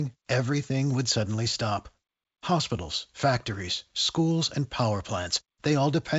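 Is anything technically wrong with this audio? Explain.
No, nothing is technically wrong: the speech comes through G.722 wideband telephone coding at 56 kbit/s as expected, with nothing above 7.7 kHz and only light coding damage.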